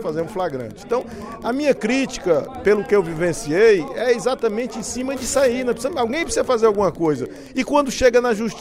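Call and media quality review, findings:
Wi-Fi interference throughout, 0 to end. Steady ticking at about ten per second, 102.4 ms spacing, about 30 dB below the signal. Probable component: nearby Wi-Fi radio. Mechanism: analogue circuit rectifies the beacon bursts into audible clicks.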